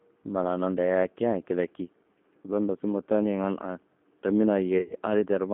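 The whole clip goes through the G.729 codec. It's a speech coder that rebuilds each 10 ms frame from a vocal-tract filter, a pitch predictor and a handful of pulses, and the thin, slightly gritty, synthetic edge you hear fits its 8 kbit/s mode. The band runs from about 200 Hz to 3.5 kHz, so there's no air or sparkle on top, and the coding damage is plainly audible on the speech itself.

From 4.78 to 4.93 s there's VoIP packet loss concealed by the speech codec. About 100 ms of audio went missing, scattered over roughly 120 ms, and the longest continuous gap is 60 ms. The decoder filled the holes by repeating its last pitch and filter settings with the level stepping down, so the speech smears into a fading buzzy tone or coloured noise there. Because each frame leans on the one before, it stays weak and a bit mangled for a moment after the packets come back.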